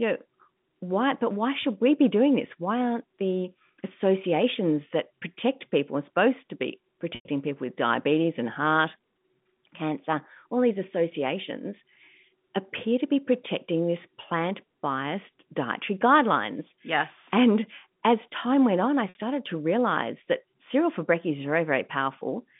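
At 7.15 s the speech drops out for 100 ms, to 7.25 s, and at 19.09 s for 60 ms, to 19.15 s. Both are packet loss with pitch repetition. The receiver bridges each gap by looping the last pitch period and fading it over roughly 50 ms. The 60 ms gap comes across as a briefly held, buzzy tone. The 100 ms gap decays toward silence before the speech cross-fades back in, all within the G.711 telephone band of 150 Hz to 3.6 kHz.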